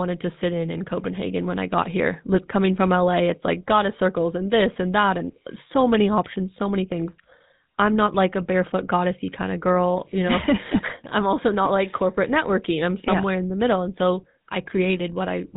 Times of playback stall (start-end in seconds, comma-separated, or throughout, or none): none